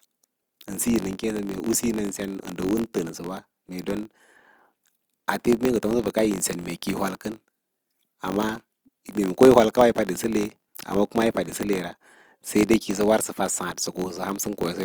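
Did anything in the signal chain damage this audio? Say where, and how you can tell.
Yes. In the block-based processing stage, a filter restarted on every block: its internal state is discarded at each block boundary, so every block begins from silence and produces a small transient. Across the whole speech clip this sounds like a steady buzz at about 46.9 Hz, which fits a 1024-sample block. The buzz rises and falls with the speech level and fades in quieter passages, which points to per-block resets rather than added hum.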